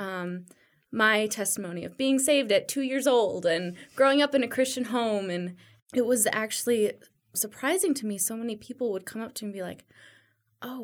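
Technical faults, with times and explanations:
No technical faults turn up anywhere in this speech recording, so there's nothing to flag here.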